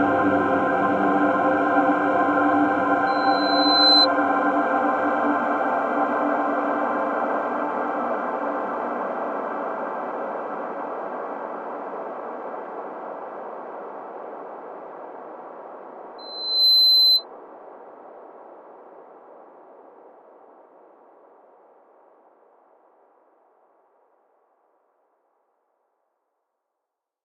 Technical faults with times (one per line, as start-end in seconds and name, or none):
3.06-4.07 loudspeaker feedback squeal
16.18-17.24 loudspeaker feedback squeal